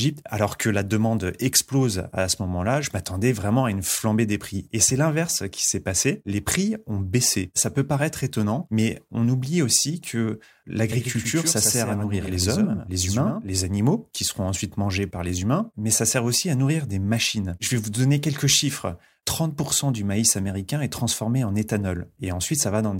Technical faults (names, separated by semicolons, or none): doubled audio track